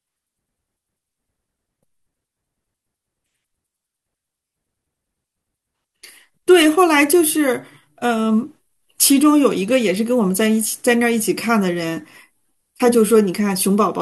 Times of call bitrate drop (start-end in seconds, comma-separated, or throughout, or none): none